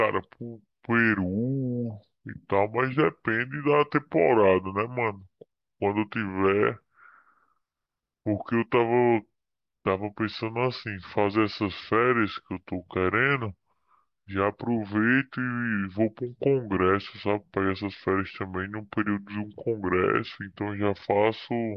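Throughout, the speech sounds low and slowed, running at about 0.73 times normal speed and dropping about 5.6 semitones: a wrong sample rate, fitting 44.1 kHz audio played at 32 kHz.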